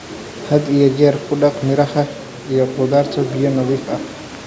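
Nothing stood out on listening to this speech; the room noise sitting about 17 dB below it and the call microphone processing, with nothing above 8 kHz, are simply part of how it was captured.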